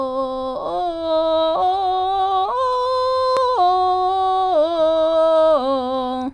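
No technical faults are audible.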